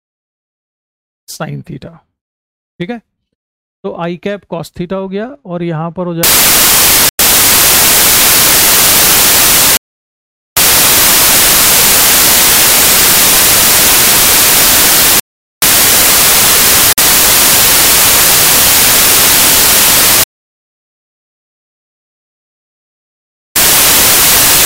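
From 6.23 s to the end, samples are built from the wrong bytes: misaligned or swapped byte order turns the low bits into loud, harsh broadband noise.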